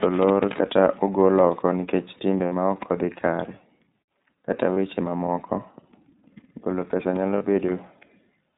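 Throughout, the speech carries iLBC codec coloring: a plainly rough, slightly synthetic texture with nothing above 4 kHz, which fits the 13.33 kbps, 30 ms frame mode. A spectrogram shows a hard ceiling at 4 kHz and grainy, smeared harmonics below it.

At 2.46 s, lost iLBC frames leave a 60 ms gap filled by a repeated final pitch cycle mixed with noise, heard as a brief held, buzzy vowel. Similar 30 ms losses follow at 4.74 s and 7.37 s. Each patch shows as flat, repeating waveform periods and frozen harmonic stripes, with normal speech returning immediately afterward.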